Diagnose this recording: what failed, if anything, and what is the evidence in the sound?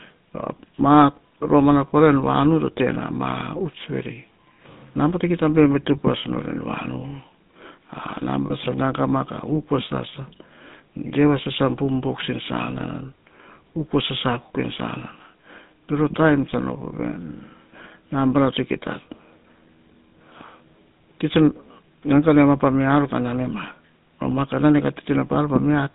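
The failure is in the codec stage: the audio has been through the GSM full-rate codec for the whole clip, and the damage is plainly audible. The speech carries a buzzy, gravelly roughness, and the band runs only from about 150 Hz to 3.7 kHz. That roughness comes from modelling the vocal tract and exciting it with a coarsely decimated pulse train, which fits a 13 kbit/s full-rate coder. A plain low-pass filter or telephone-line band limit would dull the sound without this grain.

At 8.46 s there is a brief stretch of lost GSM frames. About 40 ms of audio, roughly two frames, has been replaced by the last good frame's parameters. The result is a short rough, metallic ring that runs to about 8.53 s. The fault belongs to the network or transmission stage. Unlike a dropout, which falls silent, or a buffer glitch, which clicks or repeats raw audio, this concealment holds and smears the codec's own buzzy texture.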